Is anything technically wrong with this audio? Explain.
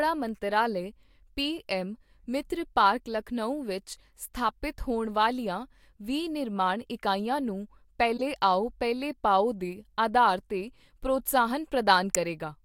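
Yes. A corrupt frame decoded at 8.17 to 8.22 s and again at 12.15 s: flipped bits in compressed speech frames sent misread gains and codes through the decoder, spraying energy at wrong frequencies. Each is heard as a chirp, squeak, blip or burst of noise; the first peaks near -25 dBFS, the second, louder, near -5 dBFS.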